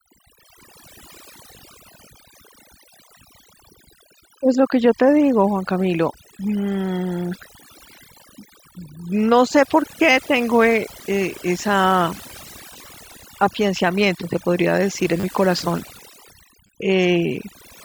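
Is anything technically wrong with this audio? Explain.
Yes, there are two problems.

Overdone noise removal runs through the whole clip. A noise reducer set far too strong switches off any frequency band near its noise estimate, taking quiet speech detail with it. The background drops and breaks up into twinkling specks.

A repeated buffer occurs at 15.20–15.23 s and again at 16.67–16.69 s. Playback ran short of new audio, so the last short block, which fits a 10 ms buffer, was replayed three times and then twice. Each repeat produces a click or brief buzz with hard joins, and a few tens of milliseconds of speech are lost.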